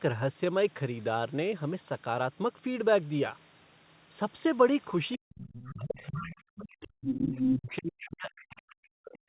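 From 5.17 to 6.32 s, the echo canceller likely misjudged double talk, confusing the talker with loudspeaker echo and suppressing both. The speech sinks by roughly 40 dB in patches totalling about a second, and the same gating returns from 6.78 s to the end.

Residual echo from the far end likely slipped past that same canceller, so the other side's voice leaks through at 5.64–6.36 s (around 15 dB under the speech), at 6.56–6.76 s, at 7.08–7.75 s (about as loud as the speech) and faintly at 8.5–8.6 s.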